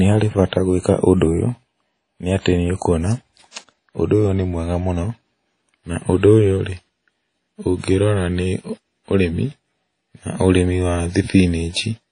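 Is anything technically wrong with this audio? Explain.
Yes. The speech carries audible codec damage throughout, and one attack is smeared by pre-echo.

Across the whole clip there is plainly audible damage, likely from WMA compression. Nothing is present above about 10.1 kHz, so the top end is dull. The damage fits a low bitrate, around 32 kbps. A transform codec like this quantises long blocks coarsely and discards weak detail. Its noise then spreads over tens of milliseconds. The speech sounds ringing and washy, with a hiss that rises and falls with the signal.

At 3.51 to 3.56 s there is pre-echo. A sharp attack sits late in a coding block. The noise sized for that loud moment is spread evenly over the block, so it also fills the quiet stretch before the onset. Here it smears about 44 ms ahead of the attack. The result is a brief hiss just before the sound begins. The attack itself loses its crispness and sounds soft.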